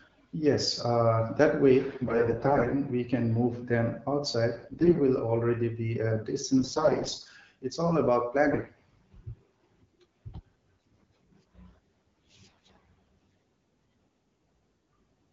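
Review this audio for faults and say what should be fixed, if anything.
AMR bit errors make the speech turn hoarse and gargly at 1.87–2.72, 4.57–5.02, 6.58–7.31, 8.52–8.94, 10.85–11.08 and 12.50–12.78 s. Flipped low-priority bits misplace the excitation pulses and skew the gain, pitch and spectral values. Pitch and level hold roughly steady. The errors point to a rate of around one bit in ten, and somewhat worse in the shorter bursts. Between bursts, the wideband AMR-WB coding at 12.65 kbit/s sounds clear. To prevent this, strengthen the radio link or add error protection for the less important bits.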